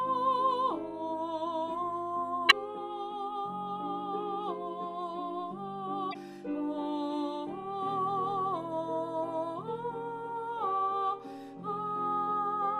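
Two brief glitches, at 2.47 to 2.53 s and 6.10 to 6.16 s, are damaged data in a compressed stream: corrupted frames make the decoder lose sync and resynchronise.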